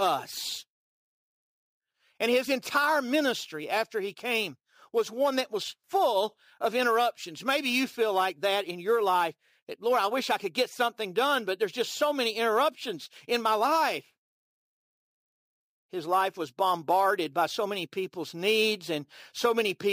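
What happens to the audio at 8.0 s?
Crude rate conversion is present at 8.0 s, as it is throughout the clip. The speech appears to have been stepped up from 32 kHz to 44.1 kHz by simply repeating the nearest sample, with no filtering. This leaves an inharmonic, gritty fizz roughly 20 dB below the speech that rides on its louder, brighter sounds.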